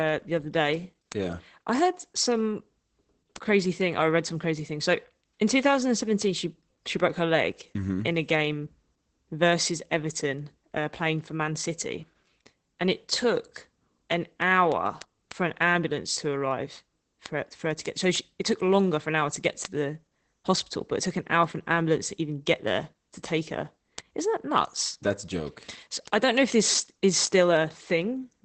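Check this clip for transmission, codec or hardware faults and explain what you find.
One fault runs through the whole clip: Opus voice compression, from start to finish. The encoder is working in its speech-oriented SILK mode, which models the voice with linear prediction and codes the excitation signal with few bits. That coarse excitation is plainly audible as a hoarse, somewhat robotic texture on the speech. Nothing is present above 8.5 kHz, consistent with wideband operation, and the overall sound fits a low bitrate of around 12 kbps.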